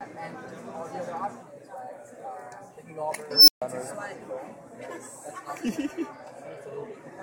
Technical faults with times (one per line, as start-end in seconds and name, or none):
3.31-3.62 unstable filter